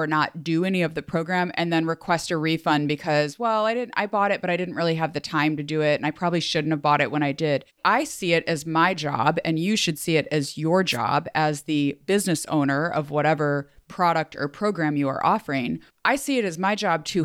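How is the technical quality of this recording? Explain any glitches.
One clear glitch occurs in this speech recording. At 10.90–10.98 s, between "see it as your" and "as the business owner", a wireless microphone noise hit appears: the FM signal fades, receiver noise surges as a brief static swish, and a spectrogram shows a broadband smear.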